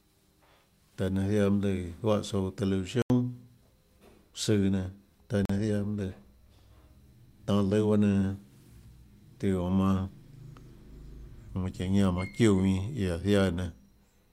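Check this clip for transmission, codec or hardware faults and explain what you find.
Two short gaps in this speech clip point to a Bluetooth dropout. The first runs from 3.02 to 3.10 s, right after "juáhã tsouã", and loses about 81 ms. The second runs from 5.45 to 5.50 s, after "søã nenã taã", and loses about 41 ms. These lengths fit roughly four and two lost packets. The likely mechanism is that audio packets reached the headphones too late and were discarded, so the output fell silent. Unlike a buffer underrun, which pauses and then continues from where it stopped, the speech here resumes as though it had kept playing, skipping the missing stretch.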